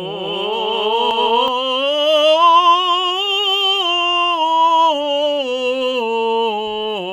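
From the very start until 1.48 s, the music carries a doubled audio track: a second, full-band copy trails the original by roughly 400 ms at about equal level, likely because the signal was picked up again through a slower path. On a waveform, every transient appears twice at that fixed spacing. A spectrogram shows each onset echoed as a clean duplicate with no decay tail, and the copy cuts off abruptly at 1.48 s.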